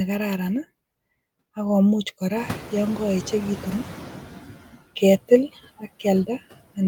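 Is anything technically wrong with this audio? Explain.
Yes, this speech has two noise-reduction faults.

Noise suppressor artifacts run through the whole clip. The suppressor judges, frame by frame, which frequency bands hold steady noise and pulls them down by about 14 dB. Because that decision keeps shifting, the background drops away in the gaps between phrases and swells back up under speech.

Noise suppressor catching up occurs from 2.36 to 4.59 s, right after "ak komuch". The room noise jumps by about 25 dB at roughly two and a half seconds in, to about 17 dB below the speech. The suppressor's noise estimate is still tuned to the quieter background, so the louder noise first passes through with too little reduction. The estimate then adapts over about 2.2 s, applying about 10 dB of cut, and the noise audibly sinks.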